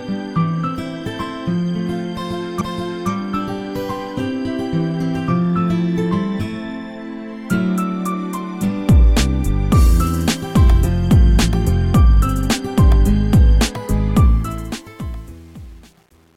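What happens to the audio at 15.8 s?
The fade-out's gain stage is keeping too few bits, about 8, and adds no dither, so at 15.8 s the audio is deep inside truncation distortion on the fade, which runs from 14.20 s to the end at 16.37 s. As the level drops toward the smallest step, the waveform collapses into coarse square steps. From about 14.80 s onward, including 15.8 s, the tail sounds gritty.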